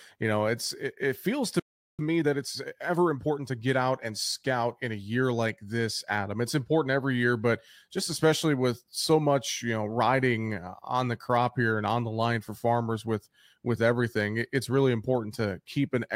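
A playback stall, most likely the player running short of data, silences the speech from 1.6 to 1.99 s, cutting in for 0.39 s right after "it it feels to". Time-compressed catch-up follows as the player drops small cross-faded pieces to clear its backlog, hurrying speech to 1.25 times normal speed without changing pitch from 1.99 to 3.55 s, before "get out and scout".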